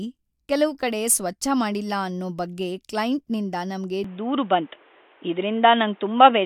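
At 4.04 s the speech turns dull and boxy and stays that way to the end. Nothing is heard above 3.8 kHz from that point. The change is instant, with no gap at the switch. The level shifts by a few dB. A faint new background noise appears, well below the speech. This is likely an input switched to a poorer device, such as a second microphone or a headset's call profile with a narrower band.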